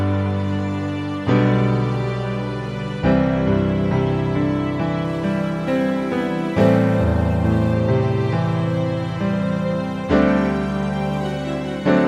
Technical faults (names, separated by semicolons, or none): crude rate conversion